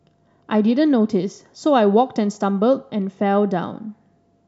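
Speech recording; no technical faults can be heard.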